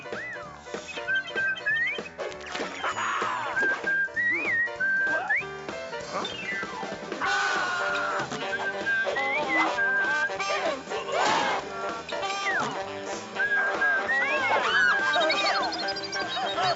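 No technical fault can be heard anywhere in the audio.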